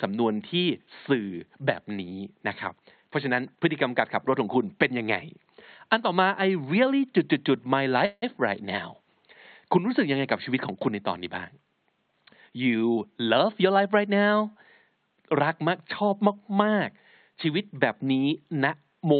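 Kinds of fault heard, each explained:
Call audio freeze: at 8.05 to 8.24 s the sound hangs as a fading buzz or hiss, ending in 30 ms of silence, likely from late packets; nothing is lost afterwards, unlike a dropout.
Jitter buffer speed-up: from 12.07 to 13.79 s speech runs about 10% fast, with around 200 ms trimmed, yet pitch stays unchanged, unlike a pitch-shifting speed error.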